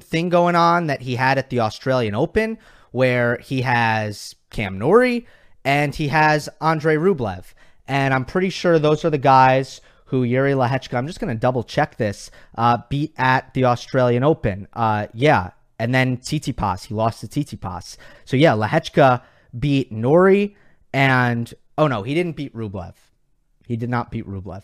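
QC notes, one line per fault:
No faults heard anywhere in this speech clip.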